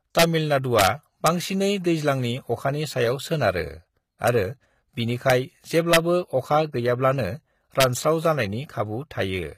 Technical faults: HE-AAC compression; integer overflow

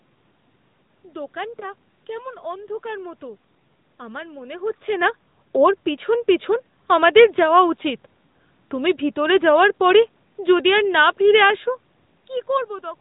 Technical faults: AMR narrowband mobile codec; lost AMR speech frames

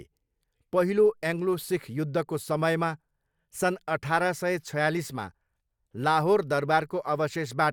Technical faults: none

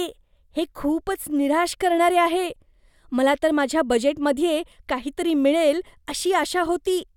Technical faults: none

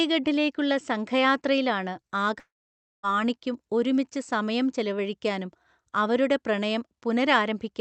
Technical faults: long network dropout

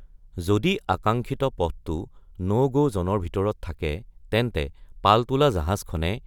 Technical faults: none

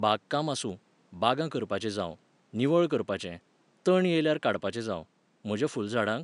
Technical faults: none

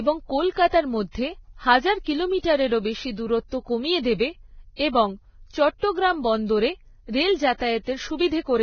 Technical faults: Vorbis compression

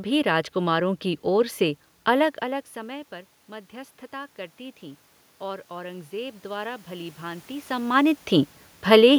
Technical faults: automatic gain rising

